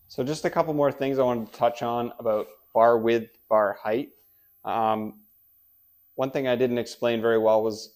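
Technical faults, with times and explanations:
Throughout, switching supply whistle: a faint high whistle wanders between 14.21 and 14.50 kHz, roughly 35 dB below the sound. A power converter is cycling within hearing range, and that drifting pitch separates it from a fixed-frequency interference tone.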